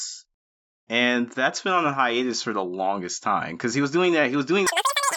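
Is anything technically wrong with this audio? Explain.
Yes. From 4.67 s to the end at 5.17 s, right after "because he was doing", there's a wrong sample rate fault. Audio recorded at 16 kHz is being played at 48 kHz with no conversion, so it runs three times too fast. Pitch jumps about 19 semitones, and the speech turns into a squeaky, rushed chipmunk blur.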